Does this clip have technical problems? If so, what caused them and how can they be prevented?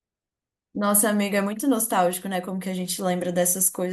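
No, no technical faults detected.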